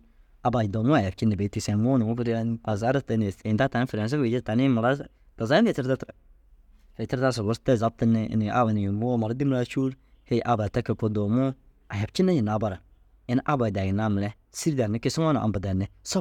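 No glitches turn up anywhere in this recording; nothing jumps out at any point along the way.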